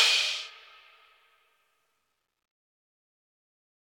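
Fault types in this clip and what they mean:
No technical faults can be heard in this clip. Nothing in the sound points to a problem in how it was captured, processed or delivered.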